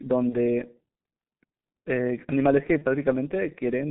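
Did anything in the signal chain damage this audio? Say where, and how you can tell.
Yes. The codec stage is the main culprit: this speech went through G.723.1 coding, heavily degraded, with the line band confined to roughly 150 Hz to 3.7 kHz. The coarse, slowly updated voice model behind this codec, at a rate that fits about 6.3 kbit/s, leaves the speech muffled and hoarse throughout, with smeared consonants.

The network stage adds VoIP packet loss concealed by the speech codec, at 0.29 to 0.36 s and 2.78 to 2.85 s, each gap fitting a single lost 30 ms frame. With no packet to decode, the decoder carried its last pitch and filter forward at falling gain. Each dropout therefore sounds like a brief, fading smear of buzzy tone or coloured noise instead of a clean gap.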